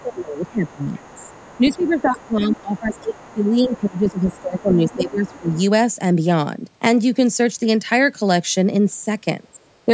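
Other side's voice leaking through, from 0.00 to 3.34 s and again from 3.72 to 5.61 s, puts a faint second voice under the speech, sitting roughly 25 dB below it. The likely cause is a loudspeaker on the talker's device feeding the far end back into the microphone, with the echo canceller leaving a residue that stays audible as a quiet, separate voice. Speech suppressed in double talk overlaps that leak from 0.02 to 5.54 s: the main voice dips, by up to around 20 dB, over about five seconds in total. It happens again briefly from 9.56 to 9.89 s, where the voice drops by around 25 dB for roughly 0.15 s. This is likely the canceller mistaking simultaneous talk for echo and turning both down. The call's microphone processing leaves the voice band-limited to 8 kHz, which is expected for this kind of call audio.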